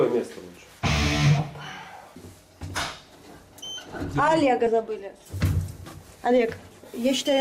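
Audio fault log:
4.66 s compressed frames skipped: a couple of 10 ms frames never reached playback, so about 20 ms vanishes and the audio jumps ahead.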